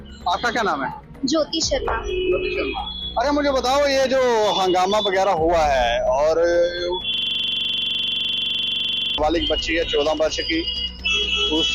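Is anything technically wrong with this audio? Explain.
Yes. From 7.14 s to 9.18 s there is a system hang loop. The computer or its audio driver stalled, but the sound hardware kept playing the same buffer over and over. A 42.67 ms slice repeats exactly, 48 times in a row. That length fits a 2048-sample buffer. At 23.4 repeats per second, the loop sounds like a fast, rattling stutter with a rough buzz. It replaces the audio that should have played there.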